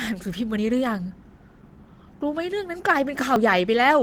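Throughout the speech, Opus voice compression is plainly audible. The coder is running in hybrid mode: a linear-prediction layer carries the band up to 8 kHz, and a transform layer handles the content above it. The band stays full, extending to about 20 kHz. The damage lies in the coarse coding of the excitation, which leaves the voice hoarse and slightly robotic. This level of degradation fits a rate around 16 kbps with 20 ms frames.

At 0.58 s the audio jumps ahead with no gap of silence. Around 40 ms of sound is missing, and the two sides are butted together. A dropped buffer (overrun) is the likely cause: the samples were overwritten before being read. The same thing happens at 3.36 s, a shorter skip of around 20 ms that gives a brief discontinuity.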